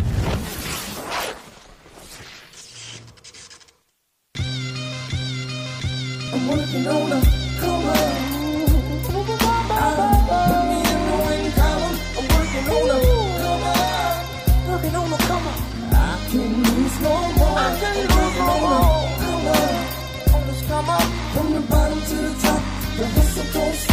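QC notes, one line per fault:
Nothing stood out on listening.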